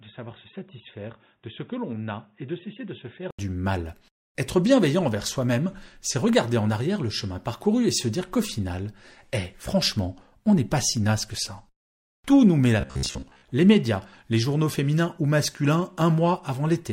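From the start to 3.39 s the speech sounds dull and boxy, about 10 dB quieter, and carrying a faint new background noise roughly 45 dB below the voice. At 3.39 s an 80 ms silence precedes a sudden return to full, clear sound. This is likely an input switched to a poorer device, such as a narrowband headset call profile, with its own tone, level and noise floor.

Between 12.81 and 13.48 s the speech becomes a rigid, metallic buzz at 66.8 Hz that still roughly tracks the words. This robotic sound from repeated short buffers likely arises because new audio arrived too seldom, so the software looped the last stretch of audio to fill the gaps, while about half of the real audio in that span was skipped. A buzz at 66.8 Hz means each repeat lasts about 15 ms.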